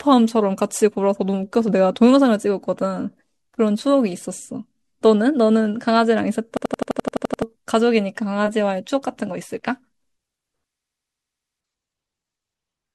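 Speech that breaks twice into a rapid machine-gun stutter, from 6.57 to 7.42 s and from 10.75 to 11.61 s, where one 85 ms fragment repeats about 12 times a second. This is a system hang loop: the system froze while the audio hardware kept replaying its ring buffer, which fits a 4096-sample buffer, and roughly a second of speech is lost each time.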